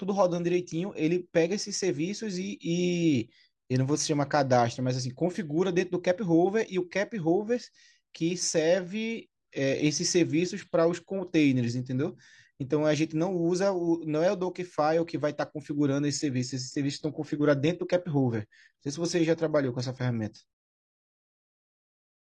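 Adaptive stream at a lower bitrate, from 16.11 to 20.11 s: for four seconds the speech abruptly loses quality with no gap in the audio, as the player switches to a cheaper version of the stream while the connection slows. The treble turns thin and synthetic and codec artefacts become audible, which fits a drop from around 96 kbit/s AAC to roughly 24 kbit/s HE-AAC with rebuilt high frequencies. Full quality returns just as suddenly at 20.11 s.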